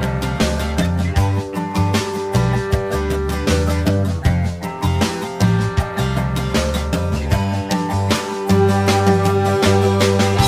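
From start to finish there's channel delay, comb filtering style: one side lags the other by around 10 ms, so summing to mono cancels at evenly spaced frequencies, starting near 50 Hz. The result is a hollow, phasey sound with fixed notches.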